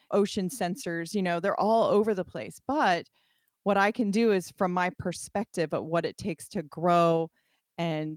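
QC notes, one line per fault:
No technical faults are audible anywhere in the recording.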